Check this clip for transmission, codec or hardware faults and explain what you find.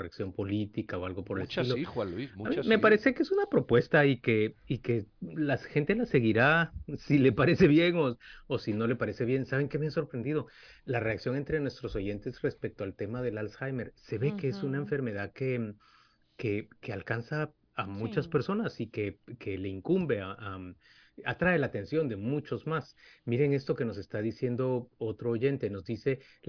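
No faults found.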